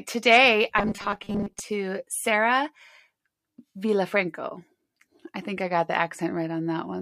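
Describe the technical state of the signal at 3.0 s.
At 3.0 s the speech signal is intact, with no audible fault at that moment.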